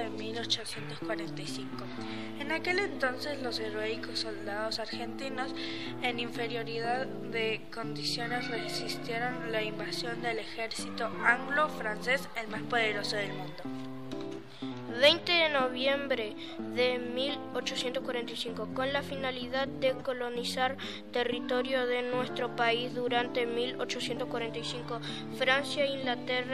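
No technical faults can be heard anywhere in the recording, and the signal holds steady throughout.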